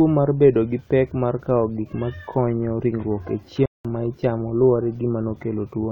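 At 3.66 s, right after "ma konyo ringruok e", the speech cuts to silence for about 0.19 s until 3.85 s, then picks up at "ma ichamo luwore". This playback stall likely came from the player running dry, and shows as a flat gap in the waveform and spectrogram.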